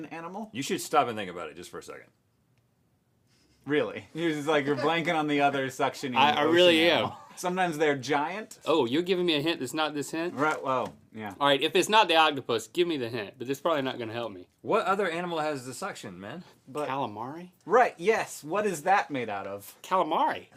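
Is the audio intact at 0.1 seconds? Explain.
Yes, the audio at 0.1 seconds is intact, with no dropout, click, distortion or other fault audible at that moment.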